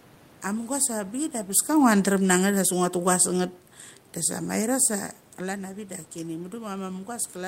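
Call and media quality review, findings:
Automatic gain falling, 1.69–3.53 s: speech level eases down by about 3 dB over roughly two seconds, with the room noise sinking alongside it. The AGC stage judged the input too loud or its background noise too strong and pulled its gain back gradually. This is distinct from the talker movement near 1.5 s.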